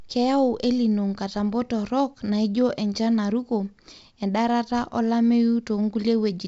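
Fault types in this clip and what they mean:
No fault types are present in this clip, which carries speech over G.722 wideband telephone coding with nothing above about 7.8 kHz.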